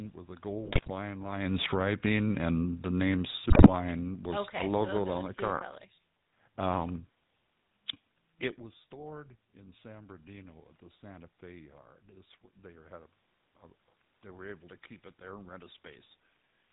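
Throughout the clip the speech carries the coarse, buzzy grain of the GSM full-rate codec, consistent with its 13 kbps rate. The decoder rebuilds each stretch of voice from a vocal-tract filter driven by a sparse, regularly spaced pulse train, so the excitation lacks fine detail and everything above 4 kHz is gone. The result is a gravelly roughness laid over the whole recording, not a momentary break, which separates it from the bursts below.

From 0.64 to 0.91 s GSM bit errors corrupt the decoding, and they return from 3.50 to 3.69 s more densely. The first burst suggests around a dozen damaged frames and the second fewer but harsher ones. Flipped bits land in the filter, pitch and gain parameters, so individual frames come out with a warped spectrum or a sudden jump in level. The sound breaks into squawks, pops and gargling. Unlike the codec's steady roughness, these are short, violent disturbances confined to those windows.

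At 1.28 s the automatic gain falls, dropping about 8 dB by 1.91 s. Having judged the input too loud or its background noise too strong, the control eases its gain down, and voice and background sink together. A talker shifting position around 1.5 s also changes the level, but that moves only the voice, while the gain change pulls the room noise down with it. A second fall runs from 2.44 to 5.73 s, about 6 dB spread over more than three seconds, and includes the second error burst.

Between those falls, from 1.85 to 2.47 s, the automatic gain rises by about 5 dB after the control decided the input had become too quiet. Speech and background swell together over roughly half a second. A talker leaning closer would lift only the voice, while here the noise floor climbs in step, which marks it as the gain stage acting. The overlap at each end makes the level seesaw down, up and down again within about four and a half seconds.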